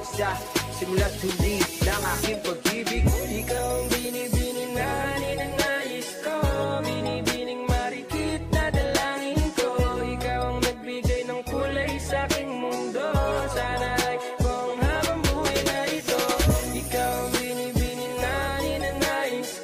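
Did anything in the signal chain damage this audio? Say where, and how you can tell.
No, nothing in the chain audibly damaged this audio.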